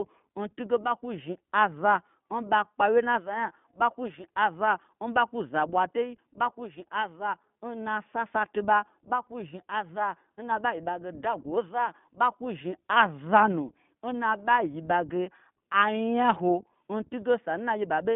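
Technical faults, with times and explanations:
Throughout, iLBC codec. The speech is confined to a narrow telephone band, roughly 150 Hz to 3.5 kHz, with nothing above 3.7 kHz. Sibilants lose their edge and the sound is muffled. The codec rebuilds each frame's excitation on its own, so the voice turns rough and slightly synthetic. The damage is plainly audible. The texture suggests 20 ms frames and the 15.2 kbps mode.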